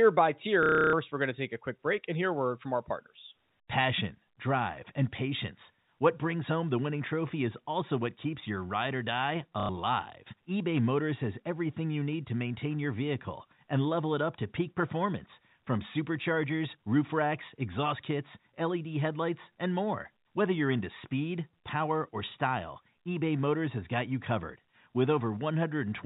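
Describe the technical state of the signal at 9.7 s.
Right after "your ride or die", from 9.6 to 9.69 s, there's packet loss with the last packet repeated. About 90 ms went missing, which fits three 30 ms packets, and the receiver looped the last good one, giving a buzzy little robotic stutter.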